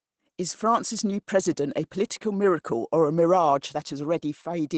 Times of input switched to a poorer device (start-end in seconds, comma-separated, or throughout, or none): none